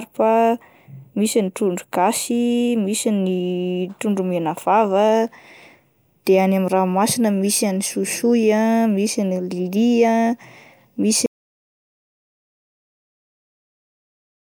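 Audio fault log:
11.26 s to end: audio dropout to silence. The speech cuts off abruptly and never returns. The remaining gap is silent, with no room tone or noise floor. The input was likely lost, with the recorder writing silence until the clip ends.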